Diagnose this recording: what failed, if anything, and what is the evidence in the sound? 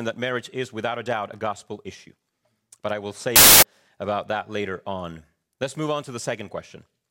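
From 3.36 to 3.63 s the speech collapses into loud noise with a faster, higher trace beneath, about 1.33 times speed. This is a wrong sample width at the sample-format conversion stage: packed 24-bit data read as 32-bit integers.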